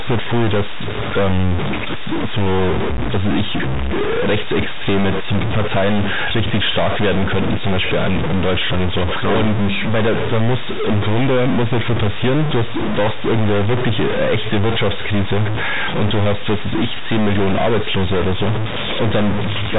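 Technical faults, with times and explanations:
Throughout, stuck bit: one data bit is likely held at a fixed value by a broken line or converter, so about half the samples are off by that bit's weight. The speech, carried in a telephone band that stops near 3.8 kHz, sounds distorted, and the pauses fill with noise.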